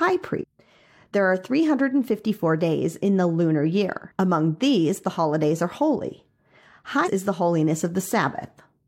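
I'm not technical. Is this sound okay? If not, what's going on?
No. There are two short glitches in this speech. The first is at 0.38 to 0.44 s, and the second is at 7.02 to 7.08 s. Each lasts well under a tenth of a second and sounds like a brief chirp, squawk, click or short gap. This is damaged data in a compressed stream. A small piece of the stored file is wrong. The player can't read that part, loses its place, and hunts for the next good section.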